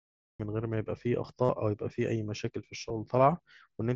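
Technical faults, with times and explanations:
0.00–0.40 s, cut-off start: the recording began late, so digital silence breaks straight into speech at 0.40 s with no natural attack or fade-in.
1.45–1.49 s and 2.89 s, concealed Bluetooth headset packet loss: lost headset packets were filled by repeating the last stretch of waveform. The 45 ms run, which fits about six lost frames, buzzes at full level, while the single 2.89 s loss is nearly hidden.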